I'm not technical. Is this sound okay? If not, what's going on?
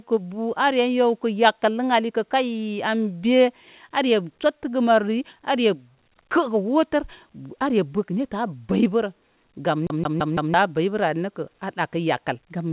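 No. A CD stuck on one turn appears from 9.87 to 10.54 s: a scratch keeps knocking the player back, so the same 0.17 s snippet repeats four times, with tiny gaps between repeats. The phone-style call line carrying this speech leaves out everything above 4 kHz, so the top end sounds dull.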